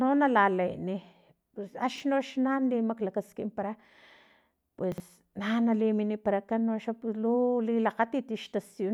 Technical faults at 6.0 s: none

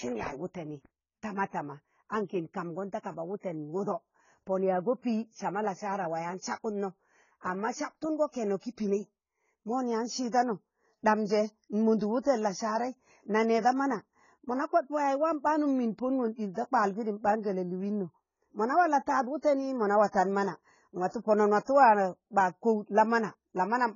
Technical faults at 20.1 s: AAC compression; pre-echo

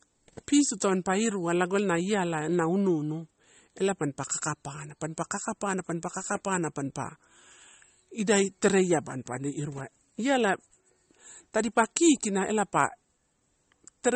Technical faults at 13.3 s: MP3 compression

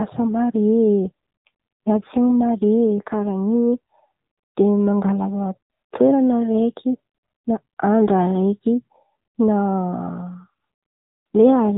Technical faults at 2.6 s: AMR narrowband mobile codec

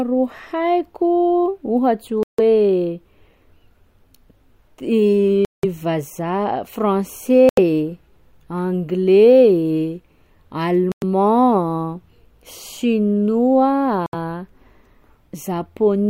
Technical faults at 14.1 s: Bluetooth stall

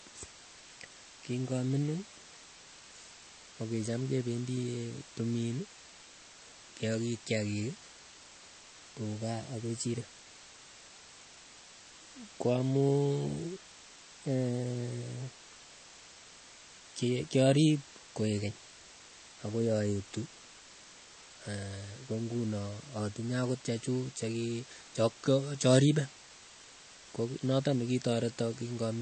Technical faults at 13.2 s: low bit depth with dither; MP3 compression

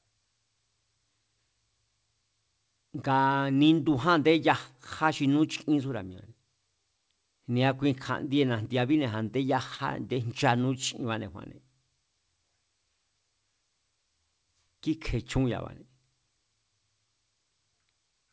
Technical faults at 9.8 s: short concealed packet loss

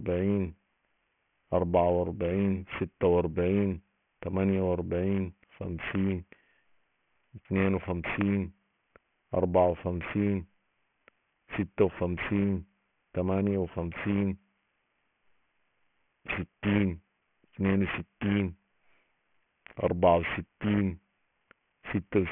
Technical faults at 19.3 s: aliasing

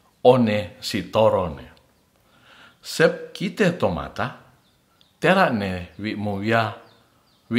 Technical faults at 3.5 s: none

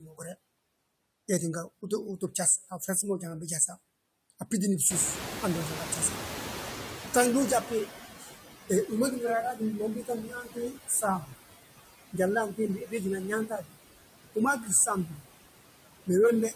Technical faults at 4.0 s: noise suppressor artifacts

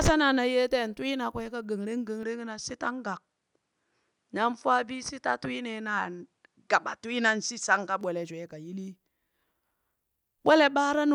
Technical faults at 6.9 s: input switched to a poorer device

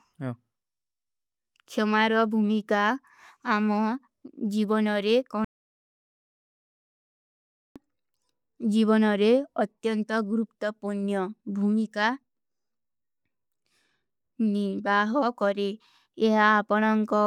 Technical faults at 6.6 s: audio dropout to silence

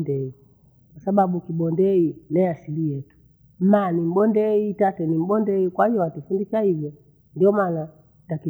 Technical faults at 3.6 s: sample clock jitter

